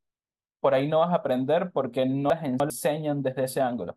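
At 2.3 s the speech runs into chunks out of order, lasting until 2.7 s. The audio is moving in 100 ms chunks, and one of them arrives late and plays after the three that should follow it. No audio is missing, but the sequence is scrambled across those 0.4 s, leaving three hard joins where mismatched edges meet. The result is a brief jumbled patch.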